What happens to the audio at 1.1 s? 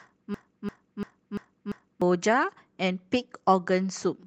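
A broken-record loop runs from 0.34 to 2.02 s, so at 1.1 s the speech is caught mid-repetition. A fragment of about 343 ms plays five times back to back, each pass identical, giving a stuttering, mechanical cycle instead of forward progress. The likely cause is a stalled player, encoder or stream that kept resending the last piece it held, so whatever should have been heard during those 1.7 seconds is missing.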